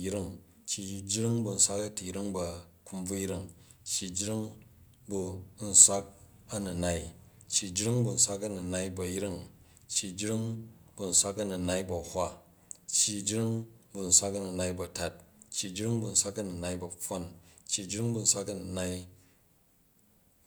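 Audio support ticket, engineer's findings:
No faults found on playback.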